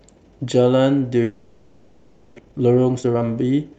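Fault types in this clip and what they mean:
Long network dropout: From 1.23 to 2.40 s the sound turns into a buzzing, hissy continuation of the last sound that fades but fills almost the whole gap without falling to silence. When the audio resumes, about 0.62 s of it is missing. The likely cause is a long stretch where no packets reached the receiver, so it kept extending the final sound and then picked up again roughly half a second behind.
Jitter buffer speed-up: From 2.42 s to the end at 3.79 s the sound plays at about 133% speed while keeping its pitch, so it comes across as hurried. The dropout left roughly half a second of surplus audio in the buffer. To shed that delay, the receiver repeatedly cut out short pieces one or a few pitch periods long until it caught back up to its target.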